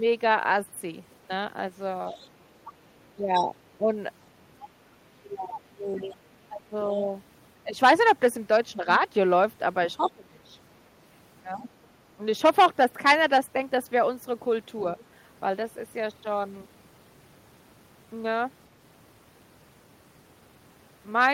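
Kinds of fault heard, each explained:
Other side's voice leaking through: The echo canceller most likely left part of the far-end signal, played on the talker's loudspeaker, in the microphone feed, so a second voice rides under the speech. The clearest stretch runs from 2.1 to 3.44 s at about 15 dB below the talker. Shorter, fainter scraps sit about 30 dB down at 5.96–6.02 s, 10.07–10.11 s and 14.99–15.03 s.
Speech suppressed in double talk: With both sides talking at once, the echo canceller likely could not tell the near talker from the loudspeaker echo and attenuated everything together. The talker's level dips in pieces at 3.16–3.91 s, 5.2–7.76 s and 9.96–12.21 s. The deepest drops are about 10, 15 and 20 dB. Only part of each span is hit, from roughly half a second up to about one and a half seconds.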